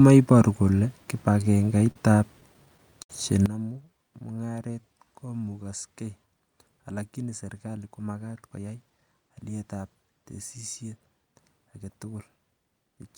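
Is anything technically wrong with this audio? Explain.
Yes, there are several faults.

Repeated stalls (stutter), 1.41–1.96 s and 2.40–3.10 s: packets arrived late, so the receiver kept extending the last sound. Gaps up to 65 ms make the speech drag and stutter.

Sudden gain jump at 3.46 s: speech and background noise drop together by about 16 dB and stay down, likely from a digital gain change applied without a ramp.

Jitter buffer slow-down, 3.73–5.64 s: the receiver repeated pitch periods to build a reserve, adding 173 ms. Speech runs at 91% speed with drawn-out sounds.

Jitter buffer speed-up, 7.66–9.39 s: the receiver cut short pitch-period pieces, about a fifth of a second in total, to shed excess delay. Speech runs at 111% speed and sounds hurried.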